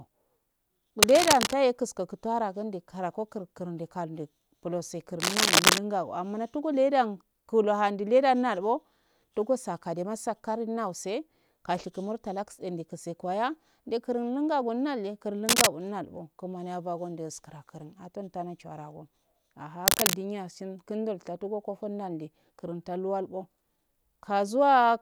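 A speech clip with cable scratch noise. Dense, uneven scratching bursts sit over the sound at 1.02 to 1.55 s, 5.20 to 5.78 s (after "karago kurindi kalundi pulose"), 15.47 to 15.67 s and 19.86 to 20.16 s. Each is about 5 dB louder than the speech. A moving, worn cable or connector is the likely cause.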